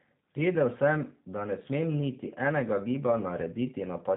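G.729 codec, throughout: speech rebuilt from a vocal tract model and sparse pulses, cut off above 3.8 kHz, sounding plainly rough and synthetic, consistent with 8 kbit/s VoIP.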